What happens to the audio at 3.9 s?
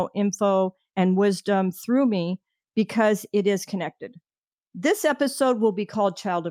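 Nothing goes wrong at 3.9 s; the speech continues intact through that moment, with no dropout, click or distortion.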